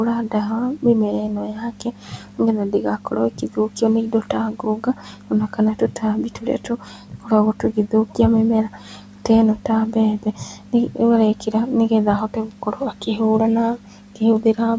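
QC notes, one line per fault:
0.14–8.19 s, 8.66–10.99 s, 11.35–11.54 s, 12.28–13.2 s and 13.76–14.59 s: speech cut by the noise suppressor. Soft consonants and word tails sound swallowed, dipping by up to about 13 dB. This adds up to around five seconds in the first span and less in each of the later ones. The suppressor misread low-level speech as background and pulled it down with the room noise, which itself sits well beneath the speech.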